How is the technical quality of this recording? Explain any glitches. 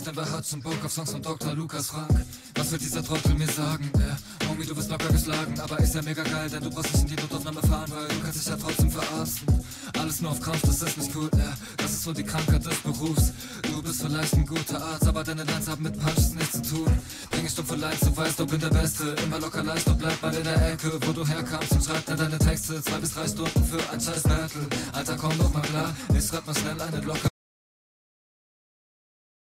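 One glitch stands out near the end. At 27.29 s an audio dropout to silence runs to the end, likely a lost input writing silence; unlike a fade or gate, it cuts abruptly, leaving no room tone.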